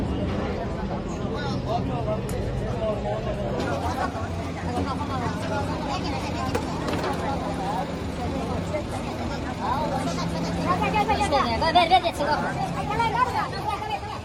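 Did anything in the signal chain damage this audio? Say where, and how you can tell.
Yes, from 3.60 s to the end there's a section at the wrong speed: 1.35 times fast, pitch up about five semitones, likely a playback clock mismatch.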